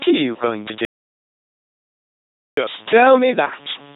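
Speech runs through an LPC-10 vocoder for the whole clip. It sounds robotic and buzzy, with heavy damage consistent with 2.4 kbit/s and nothing above 3.9 kHz. A steady, raspy mains buzz at 50 Hz and its harmonics sits underneath, roughly 20 dB below the speech. From 0.85 to 2.57 s there is an audio dropout to silence. About 1.72 s of sound is lost to silence, likely from a lost input or link.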